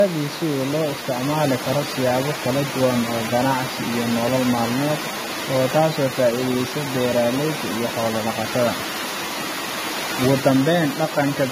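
Speech runs through the whole 12-second clip with layered compression damage. Nothing is heard above about 15.2 kHz. The sound carries two different sets of codec artefacts at once. The likely cause is transcoding between lossy codecs, an MP3 pass followed by an AAC-LC encode. The second encoder wastes bits copying the first one's errors and then adds its own. The steep top cut fits a low MP3 rate of around 96 kbit/s, and the AAC stage at roughly 62 kbit/s keeps it.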